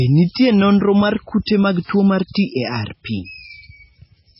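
Across the whole recording the speech sounds dull and watery, with a swirling, warbling texture and nothing audible above 5.6 kHz, so s sounds lose their crispness and consonant attacks blur. This is heavy damage, most likely from MP3 compression at a very low bitrate, which fits roughly 16 kbps: the encoder cuts off the treble at a fixed frequency and drops weak frequency lines that flicker on and off between frames.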